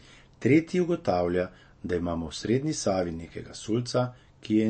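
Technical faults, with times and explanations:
Throughout, MP3 compression: the speech sounds dull and watery, with a swirling, unstable texture on sibilants and a smear on sharp onsets. Nothing is heard above 8.3 kHz. This is likely a heavily compressed MP3 whose encoder, short of bits, cut the treble at that fixed point and dropped weaker frequency components that flicker in and out between frames. The plainly audible damage points to a low bitrate of roughly 34 kbps.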